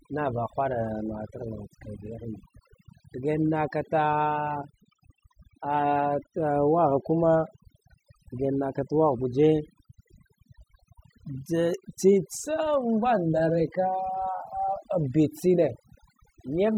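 From start to finish this speech clip carries overdone noise removal: the denoiser was pushed so hard that any frequency band sitting near its noise estimate gets dragged down or switched off entirely, and the softer parts of the voice get caught in that net too. So the gaps between phrases fall to near silence sprinkled with little twinkling specks.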